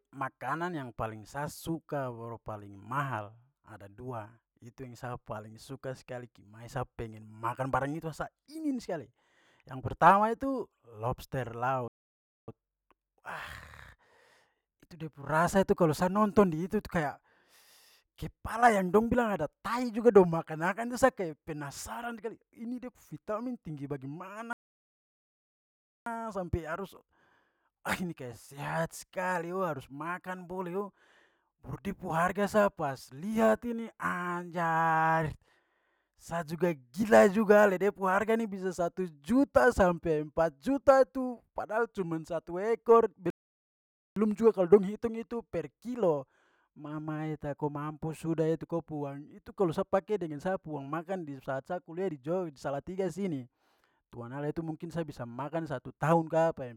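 Right after "tu lobster", at 11.88 s, the speech just drops out for about 0.6 s, then picks up again at 12.48 s. Later there's a longer gap from 24.53 to 26.06 s, roughly 1.5 s of silence, ending just before "sampai harus". A third one runs from 43.30 to 44.16 s, about 0.86 s. These are playback stalls, likely the player running dry on data or getting its thread blocked, so the output simply goes silent mid-flow until it recovers.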